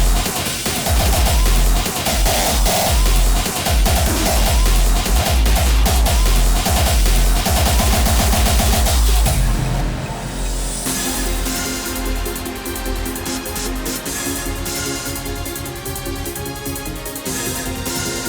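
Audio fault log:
No faults are heard anywhere in the clip. Nothing in the audio calls for an entry in this log.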